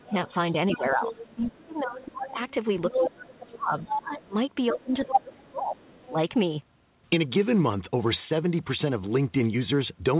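From 0.0 to 6.16 s the speech dips, dulls and breaks up, falling by about 25 dB at its deepest across roughly four seconds. This is speech suppressed in double talk. The echo canceller likely ducked everything while both sides spoke. A second voice also sits underneath: the other side's voice leaking through at 0.1 to 1.35 s, 1.99 to 4.24 s and 4.8 to 6.12 s. It grows from about 10 dB below the speech, to about 5 dB below, to roughly equal level. It is likely residual loudspeaker echo, carried over the call's band-limited path with nothing above 4 kHz.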